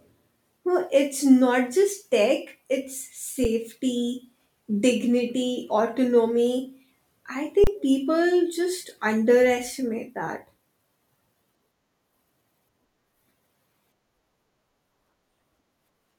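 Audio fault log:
3.44 s, underrun with held sample: the output freezes for about 6 ms at its last level, then jumps back because roughly that much audio was skipped.
7.64 to 7.67 s, underrun with held sample: a 30 ms flat hold at its last level. Unlike a dropout to silence, it starts almost clicklessly, then resumes past about 30 ms of lost audio.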